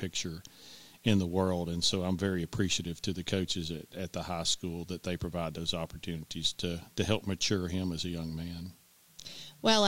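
From start to finish the speech sits on a steady, even hiss, roughly 30 dB below it. That's low bit depth with dither. The signal was rounded to very few levels, which fits a 9-bit word length, and dither turned that error into flat white noise, so there's no grit or distortion.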